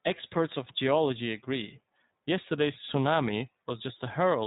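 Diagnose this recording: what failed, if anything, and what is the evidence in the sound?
The fault is in the codec stage: the whole clip has been through iLBC. Nothing above 3.8 kHz survives, and the speech has a plainly audible rough, synthetic grain from coding each frame independently, pointing to 20 ms frames at 15.2 kbps. A plain low-pass filter would dull the speech without adding that grain.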